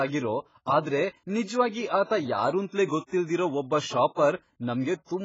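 Throughout, the speech sounds dull and smeared, nothing above 7.6 kHz, with a warbling, fizzy texture on sustained sounds and sibilants. The heavy damage is likely AAC compression (AAC-LC) quantising away detail and leaving spectral holes, which fits a bitrate around 16 kbps.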